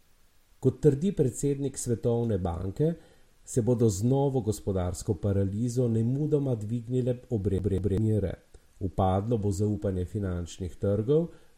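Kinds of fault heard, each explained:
CD stuck on one turn: At 7.58 s the speech catches on a fragment of about 0.2 s, which plays twice in a fast, even stutter with a brief mute at each jump before the audio moves on at 7.98 s. This is the skipping-disc effect: a scratch keeps knocking the laser back one track at the same point of the rotation, so the same short stretch comes round again on each turn.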